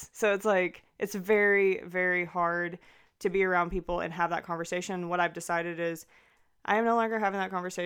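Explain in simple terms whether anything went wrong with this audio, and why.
Nothing went wrong with this speech recording that a listener can hear. At no point does the sound drop out, jump, or get interrupted.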